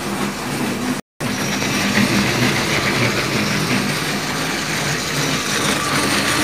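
The audio drops out completely at 1.00 s and stays silent until 1.21 s, about 208 ms, which is a textbook playback stall. The sound cuts off mid-flow rather than fading, so the player was most likely starved of data or had its output thread blocked, and it just sat there until things recovered. It's long enough to notice as a hole, not a click.

Right after it comes back, from 1.21 s to 1.61 s, there's time-compressed catch-up: the audio runs hurried at 1.5x speed while the pitch stays where it belongs. That's the player working off the backlog the stall created, trimming out small slices and cross-fading across the joins so it can get back in step. It lasts about 0.4 s, so you get a short rushed burst straight after the gap.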